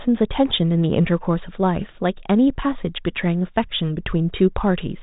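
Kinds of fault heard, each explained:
No faults can be heard in this speech. The G.726 ADPCM path at 32 kbit/s shows only as a telephone band with nothing above 4 kHz and a faint coding grain that rises and falls with the speech.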